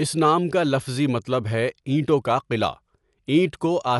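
Speech throughout the clip sounds dull and muffled, with nothing above about 11.5 kHz, and a rough, fluttering grain clings to the voiced sounds. The damage is plainly audible from start to end. The likely cause is Dolby Digital compression at a low bitrate, which fits roughly 64 kbps: the encoder narrowed the band and left many frequency lines without mantissa bits, so the decoder filled those gaps with dither noise.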